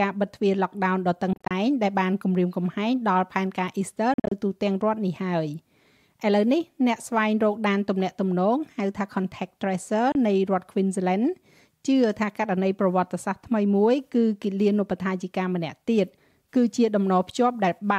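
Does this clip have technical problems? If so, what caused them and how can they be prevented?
Yes. The sound cuts out in short scattered gaps around 1.33 to 1.51 s and 4.14 to 4.32 s, plus one 29 ms hole at 10.12 s, likely a Bluetooth dropout from late packets being discarded. Keep the headphones close and away from congested 2.4 GHz traffic.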